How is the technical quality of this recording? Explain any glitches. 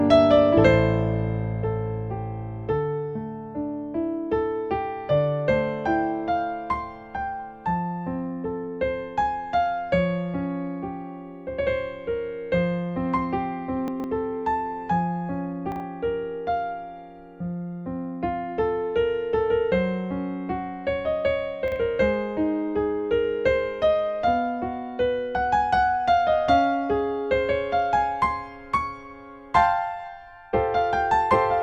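Three short glitches mar the recording, all of the same kind: chunks out of order. At 13.88 to 14.04 s, one 40 ms chunk plays three chunks late; at 15.72 to 15.80 s and 21.68 to 21.76 s, a chunk arrives one position late. No audio is missing, but the sequence is scrambled, so each spot creates three abrupt joins. These sound like a brief jumbled stutter, the first event being the longest.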